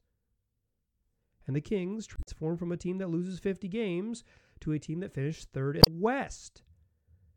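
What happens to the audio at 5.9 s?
Right after "team that finished third", from about 5.79 to 5.88 s, the speech breaks into a short chirp, squawk, click or hole lasting roughly 90 ms. That is damaged data in a compressed stream: a stretch of the encoded bytes is corrupt, so the decoder misreads or refuses those frames, loses sync and scans forward for the next valid frame header. That produces the brief blip heard at 5.9 s.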